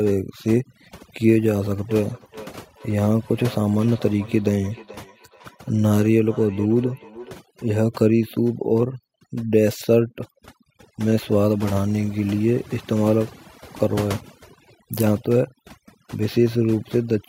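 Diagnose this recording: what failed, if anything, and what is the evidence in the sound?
Overdone noise removal runs through the whole clip, a call-processing fault. The background drops and breaks up into twinkling specks. Codec damage would smear transients instead: here the suppressor is shutting off individual frequency bands it mistakes for noise, taking quiet speech detail with them.

Feedback echo between two devices appears from 1.89 to 7.41 s, again in call processing. Speech returns as distinct repeats roughly every 400 ms, peaking at about 19 dB below the direct speech, each pass thinner and more ringing. Room reverberation would be a continuous decay, not discrete repeats at a fixed interval.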